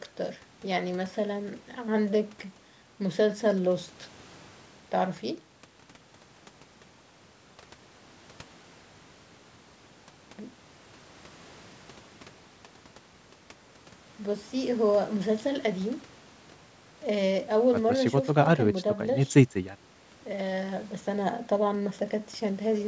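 No technical faults are audible.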